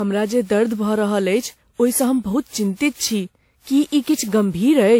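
Speech with generation loss throughout: it sounds swirly, smeared and hollow, with blurred attacks, most likely from around seven passes through a lossy codec, which fits WMA at about 96 kbit/s. A spectrogram shows nothing above 19.9 kHz.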